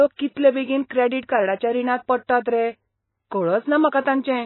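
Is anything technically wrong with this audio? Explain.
Yes. Throughout the speech there is heavy damage consistent with MP3 compression, likely from a very low bitrate in the region of 18 kbps. With so few bits, the encoder cuts the treble entirely, leaving nothing above 4 kHz, and drops weak spectral lines that flicker in and out between frames. The sound is dull, watery and swirling, with smeared consonant onsets. A spectrogram shows a flat ceiling at 4 kHz and patchy, blocky holes below it.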